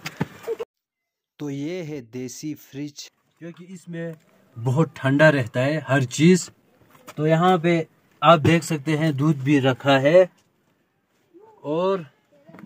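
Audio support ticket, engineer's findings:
Zipper noise at 0.48–1.1 s (dip of about 20 dB) and 3.89–4.4 s (back up about 20 dB). Fast ticking rides the level moves, around a hundred steps a second. Gain stage applying unsmoothed per-buffer steps, each one clicking.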